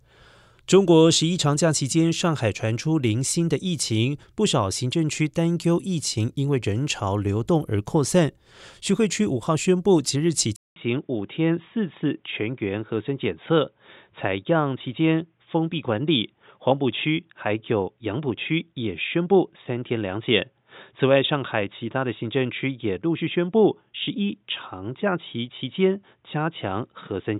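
At 10.56 s the speech cuts out for 200 ms, then returns dull, with nothing above 3.8 kHz and a faint new noise floor, likely an input switched to a poorer device. A spectrogram shows the upper band suddenly empty after a brief gap in the waveform.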